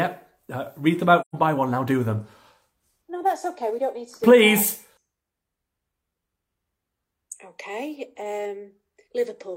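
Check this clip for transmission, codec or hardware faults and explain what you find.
One fault: AAC frame loss with muting from 1.21 to 1.35 s. The decoder zeroed the missing spectrum, and overlapping windows fade it out and in, leaving a soft-edged 128 ms hole, consistent with about three lost frames. A spectrogram shows a clean vertical blank band; the waveform tapers to silence.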